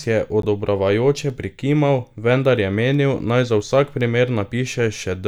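Right near the start of this speech, from about 0.42 to 0.45 s, there's a corrupt frame decoded, a short squeaky blip lasting only about 30 ms. What happened is that bits in the compressed stream got flipped across what sounds like a couple of frames, and the decoder played them anyway. The scrambled gains and codes throw energy into the wrong frequencies, peaking somewhere around -15 dBFS, so you get a brief chirpy burst.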